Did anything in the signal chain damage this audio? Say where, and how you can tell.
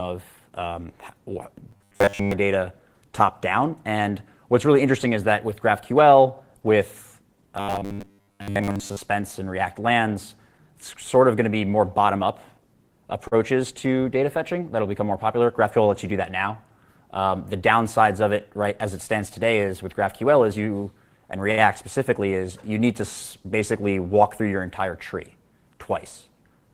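Yes. From 1.71 to 2.34 s and again from 7.57 to 9.01 s, the sound turns into a rigid, metallic buzz locked at 100 Hz, with most of the real audio in those stretches replaced. This is robotic sound from repeated short buffers, likely at the driver or buffer stage: audio arrived too seldom, so a 10 ms piece was looped, imposing that 100 Hz pitch. A late-packet stall holds once and resumes; this buzz persists and skips content.

At 13.27 to 13.35 s and 21.51 to 21.61 s, there are two short stalls from a late packet on the network side. The sound is held, for 41 ms and then 64 ms, and then carries on from exactly where it stopped with nothing missing. The jitter buffer ran dry and the receiver stretched the last sound until the packet came. Unlike the robotic stretches, each is a single brief hold, not a sustained looping buzz.

From 16.12 to 16.52 s the audio is rushed to about 108% speed with its pitch unchanged, roughly 40 ms having been cut out. 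This is a jitter buffer speed-up at the receiver. With too much audio queued, it trimmed short pitch-period pieces in succession to shrink delay. Keeping the pitch steady separates it from a clock or sample-rate mismatch, which would shift pitch along with speed.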